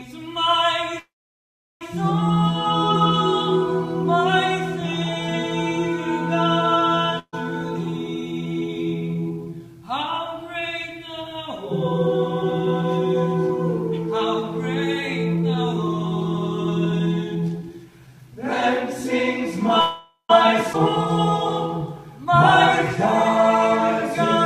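From 0.99 to 1.83 s the sound stops and a short held tail fades into about 0.74 s of silence. Playback then carries on exactly where it left off, with nothing lost. This is a call audio freeze, likely caused by packets stalling in transit until the jitter buffer emptied. The pause adds about 0.8 s of delay.

At 7.19 to 7.35 s the last sound is briefly held and fades, including about 60 ms of silence. The sound then resumes slightly further on. This is a burst of packet loss: around 140 ms of audio never arrived, and the receiver stretched and faded the last sound to cover the hole.

From 8.14 to 13.48 s the audio sounds hurried but keeps its pitch, running at about 107 % speed. This is a jitter buffer speed-up: the buffer had grown too full, so the receiver trimmed many pitch-period slices, roughly 0.4 s in total. It happens again from 15.35 to 19.58 s at about 108 %, removing about 0.3 s.

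From 19.80 to 20.31 s a second call audio freeze gives a fading hold with about 0.14 s of silence. It was likely another delivery stall, which adds half a second of delay without losing any content.

At 20.73 to 20.76 s playback jumps abruptly forward. This is a skip ahead: roughly 150 ms was discarded while later audio was already queued, and the two edges are butted together with almost no gap.

A last, mild jitter buffer speed-up from 22.18 to 23.38 s runs at about 102 % and trims only a few tens of milliseconds, so the rush is barely audible.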